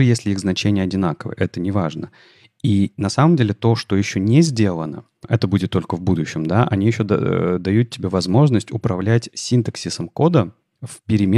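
No technical faults are audible.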